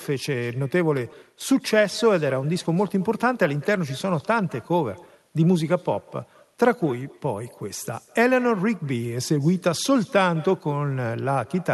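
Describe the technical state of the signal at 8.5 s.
At 8.5 s, as throughout, echo with no canceller returns the speech about 200 ms later, roughly 24 dB quieter and thinner: a distinct delayed repeat, not smeared room reverb.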